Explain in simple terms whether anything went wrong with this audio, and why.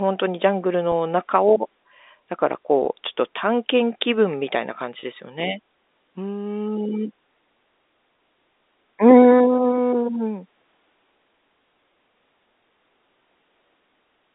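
Brief gaps in the sound are patched over, four times. This is packet loss with pitch repetition. The receiver repeats the last tiny bit of sound to fill each hole. Listen at 0.92, 2.85 and 8.17 seconds, about 10 ms each, and 5.00 to 5.03 seconds, about 30 ms. Each gives a short held buzz, all within the narrow telephone band.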